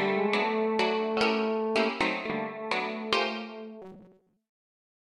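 A recording of everyday sounds turns into a rigid, metallic buzz at about 188 Hz from 3.82 to 4.37 s, the robotic sound from repeated short buffers. The likely cause is audio arriving too seldom, with a roughly 5 ms slice repeated to fill most of that stretch while the real sound is skipped.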